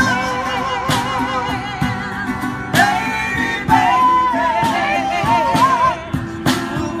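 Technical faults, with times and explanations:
No technical faults are audible; the signal stays steady and unbroken throughout, with nothing suggesting trouble in how it was captured, processed or delivered.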